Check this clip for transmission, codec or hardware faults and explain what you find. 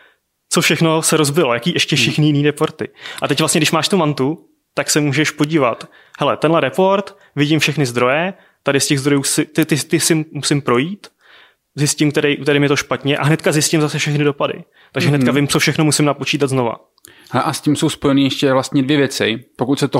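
Three sharp impulsive faults are present in the speech, all of the same kind.

Electrical switching spikes occur at 5.44 s (after "mantu tak se můžeš"), at 9.63 s (between "těch zdrojů si ty" and "ty ty si musím") and at 15.55 s (between "hnedka vím" and "všechno musím napočítat"). Each is a sharp snap lasting about a millisecond, sitting on top of the voice. The first two are the strongest and the third is about 5 dB weaker. These are likely caused by a nearby switch, motor or static discharge arcing and coupling into the audio line.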